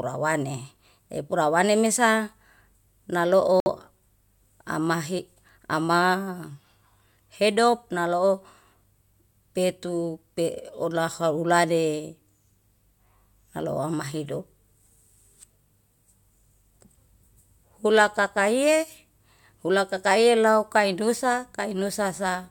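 At 3.60 s the speech drops to silence for about 60 ms and then resumes by 3.68 s, a clean gap with no fade at either edge. This is a Bluetooth stall, likely caused by radio interference delaying packets on the wireless link. The receiving buffer empties, playback halts, and output restarts once the retransmitted packets arrive. It sounds like a brief hard dropout inside the speech.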